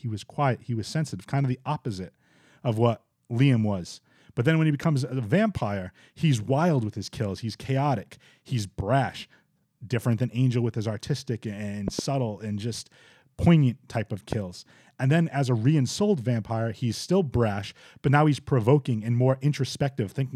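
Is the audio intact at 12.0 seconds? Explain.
No. From 11.88 to 12.01 s, between "with his artistic" and "and just poignant type", a loud pop interrupts the speech: two sharp pops in quick succession, standing well above the level of the voice, while the speech continues underneath. The likely cause is a sudden voltage pulse entering the signal chain, such as a connector, a switch or static, whose shaped transient sits on top of the audio.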